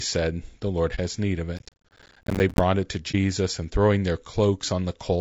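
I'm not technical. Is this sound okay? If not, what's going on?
No. Three kinds of problem can be heard in this speech clip.

All the way through, the voice sounds rough and grainy, a little hissy between its tones, with a thin, slightly artificial top end. That is the sound of low-delay AAC compression, the format that video-call software uses to shrink audio quickly. This is likely AAC-ELD squeezed hard: it works in very short slices, so it can't capture the voice's tonal detail well and fills the gaps with noise.

At about 0.95 to 0.99 s, and again at about 3.11 to 3.15 s, the voice briefly fades into a small, soft hole. This is AAC frame loss with muting: one chunk of compressed audio, about 30 ms, never arrived, so the player filled it with silence and smoothed the edges.

From about 1.58 to 2.60 s, a gritty crackle rides on top of the voice and then stops. This is processor overload crackle: the computer was too busy to deliver each tiny slice of sound on time, about a hundredth of a second each, and dozens of them came out as silence, so the sound kept tearing until the load eased.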